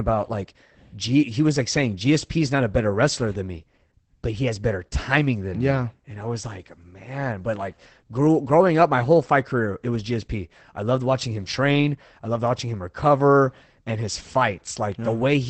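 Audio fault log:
Throughout: Opus voice compression. The speech has nothing above 8.6 kHz, the wideband limit of Opus's SILK linear-prediction coder. The codec damage is plainly audible: the excitation is coded coarsely, which fits a low rate of about 12 kbps in 20 ms frames. A plain low-pass filter would dull the top without roughening the voice. Here the band edge comes with the predictive coder's textured, slightly synthetic quality, which points to speech-model coding rather than filtering.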